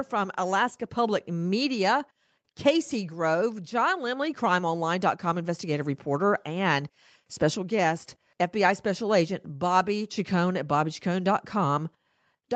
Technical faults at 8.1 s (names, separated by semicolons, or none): none